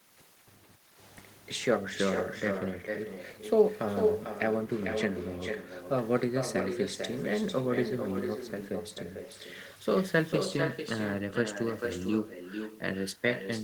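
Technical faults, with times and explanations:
Throughout, echo with no canceller: the far end's loudspeaker feeds its microphone, so every phrase returns roughly 0.4 s later, about 6 dB down, and thinner.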